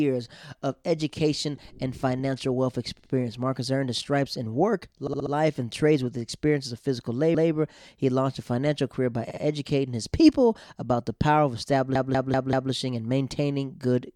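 Stutters occur at 2.99, 5.07, 7.34, 9.30 and 11.95 s, where a slice of speech replays: 64 ms twice, 64 ms four times, 160 ms once, 64 ms twice, then 192 ms four times. These are repeated frames, compressed blocks sent again and decoded again, which lengthens the audio.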